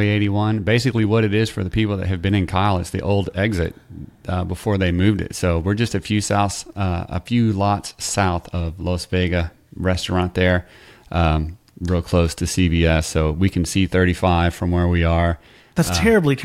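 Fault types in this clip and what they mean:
No faults detected in this speech recording; nothing to log.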